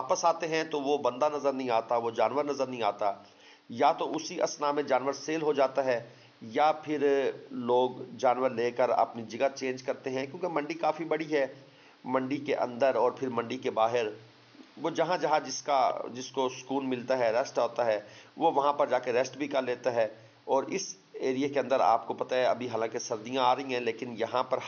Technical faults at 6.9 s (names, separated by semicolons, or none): none